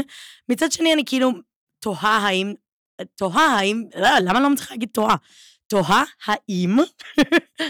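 Hard clipping hits the speech seven times: 0.52–1.28 s, 2.05–2.34 s, 3.24–4.47 s, 4.98–5.14 s, 5.75–6.34 s, 6.77–6.81 s and 7.18–7.38 s. In each, the level exceeds what a stage can pass, by about 4 dB at first and 6 dB next, then about 9–11 dB through most later bursts. Peaks are sliced flat, spraying high harmonics. The milder stretches crackle on peaks; the heavier ones become a harsh fuzz.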